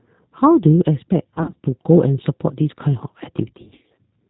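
Throughout, the speech sounds plainly rough and slightly synthetic, with nothing above 4 kHz, which fits the G.729 codec at 8 kbit/s. Each 10 ms frame is rebuilt from a vocal tract filter, a pitch predictor and a few pulses, so the fine detail is lost.

From 1.35 to 1.65 s and again from 3.62 to 3.99 s, the speech is stretched into a buzzy tone or a coloured noise that fades, then weak and distorted. This is VoIP packet loss concealed by the speech codec. About 150 ms and then 220 ms of audio went missing in gaps of up to 50 ms each. The decoder filled these gaps from its last pitch and filter, and each rebuilt frame builds on the one before, so the damage lasts across each span.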